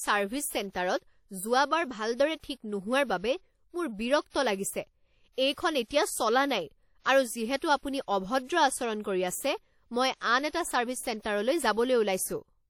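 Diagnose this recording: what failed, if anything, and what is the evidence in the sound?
WMA compression runs through the whole speech recording, a failure at the codec stage. The damage is plainly audible: the speech carries a washy, ringing quality, and a hiss rises and falls with the speech rather than sitting steady. Nothing is present above 18 kHz. The likely cause is a transform encoder using long blocks, which spreads quantisation noise over tens of milliseconds around each sound and zeroes weak spectral detail, consistent with a bitrate near 48 kbps.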